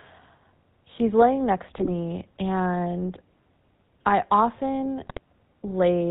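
The whole clip runs through the GSM full-rate codec, which sounds like the 13 kbps full-rate coder: nothing above 4 kHz, and a plainly buzzy, gravelly roughness from its pulse-driven vocal-tract model. Right after "he's laying next", around 1.78 to 1.89 s, and again after "I often", from 5.02 to 5.19 s, GSM bit errors corrupt the decoder's filter, pitch and gain values, so the audio briefly squawks and gargles.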